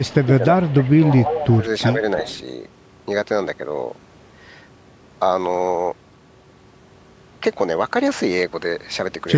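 From the first instant to 0.13 s a faint, delayed copy of the speech sits underneath, trailing it by 340 ms and roughly 25 dB down. This is echo leak: the far end is likely playing the call over a loudspeaker, and its echo canceller let part of what its microphone picked up travel back. Overlapping that, from 0.1 to 1.02 s, the talker's own speech sags and thins in patches totalling around 0.7 s, dipping by as much as 10 dB. This is speech suppressed in double talk: with both sides active, the echo canceller likely could not tell the talker apart from the loudspeaker echo and turned everything down. The echo returns weakly from 0.69 to 0.86 s, about 30 dB below the speech, and then much more plainly from 1.1 to 1.57 s, only about 10 dB under it, again trailing by 340 ms. The suppression strikes again in two shorter dips of around 5 dB, from 1.51 to 1.64 s and from 1.94 to 2.03 s. A last scrap of echo, again about 25 dB down, runs from 2.18 to 2.4 s. 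Through all of this the call's microphone processing keeps the audio within 8 kHz.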